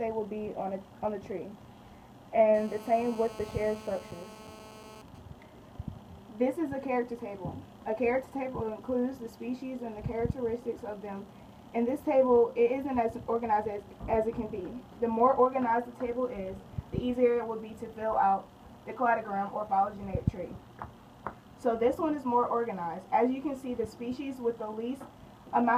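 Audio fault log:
2.54–5.02 s, GSM phone buzz: a hard, raspy buzz at 217 Hz, rich in harmonics, sits about 18 dB below the sound. A nearby 2G phone in a call transmits in bursts 217 times a second. The audio circuit rectifies each radio pulse into this steady drone.
5.08–5.81 s, GSM signalling bursts: even ticks with a longer 217 Hz buzz twice a second follow, well below the sound. The phone is still in a call, but its user is silent. So it sends only short groups of bursts, which the circuit rectifies.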